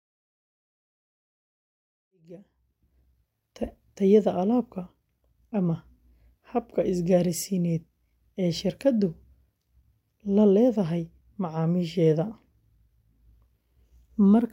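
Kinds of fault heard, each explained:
Nothing here needs flagging; the gentle rise in level from around 2 s to about 3.19 s is just an ordinary fade-in, easing up with no click or hard edge.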